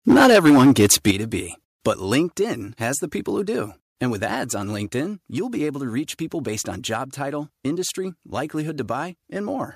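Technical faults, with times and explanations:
0.09 to 1.11 s, microphone overload: The loudest syllables sound harsh and crackly. Their peaks run about 8 dB past full scale, and roughly one sample in seven is flattened at the limit. Squaring off the waveform tops adds a gritty edge. The likely cause is an input level set too high, so the converter ran out of headroom on every strong peak.
0.12 s, 1.11 s and 2.28 s, microphone volume stepped down: The speech and the background both drop suddenly, by about 2 dB, about 8 dB and about 3 dB. Each drop is a single step, not a gradual fade. The largest step lands exactly where the distortion stops. This pattern likely comes from call software that detected clipping and cut the device's input volume in steps.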